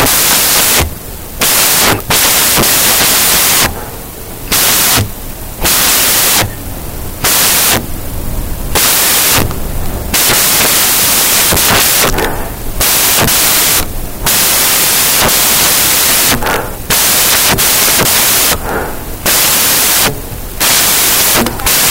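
From start to end, the speech is buried under loud, harsh broadband noise, the sign of samples built from the wrong bytes. Each sample is assembled with its bytes shifted, swapped or misaligned, so the rapidly changing low-order bits land in the most significant position. Unlike ordinary added hiss, which stays at a steady level beneath the signal, this noise comes from the audio itself.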